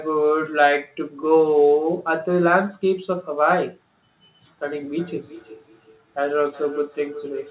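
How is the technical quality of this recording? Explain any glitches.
There is one clear glitch, heard against narrowband call audio that stops at 4 kHz, as expected from a telephone codec such as G.711. From 4.82 s onward there is feedback echo between two devices: one device's microphone picks up the other's playback, so thinning copies, about 15 dB down, repeat roughly every 0.4 s and appear as evenly spaced repeats on a spectrogram.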